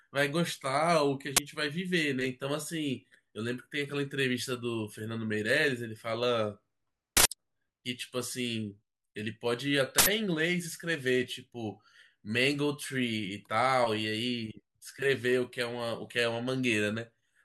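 At 1.37 to 1.39 s, then 7.17 to 7.25 s and 9.98 to 10.07 s, the speech is replaced by a loud crack and then short, loud bursts of digital noise, an uninitialised buffer played before audio was written into it, so stale memory came out as samples. The first lasts about 21 ms, which fits a 1024-sample block; the later two last about 85 ms, which fits 4096 samples. Unlike a dropout or click, each is a full block of loud noise unrelated to the speech around it.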